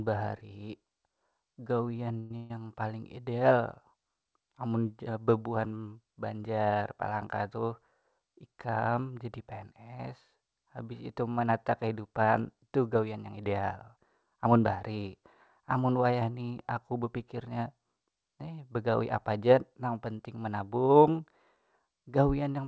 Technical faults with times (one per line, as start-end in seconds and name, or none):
1.97-2.51 repeated stalls (stutter)
8.18-8.98 jitter buffer speed-up
12.95-14.46 jitter buffer speed-up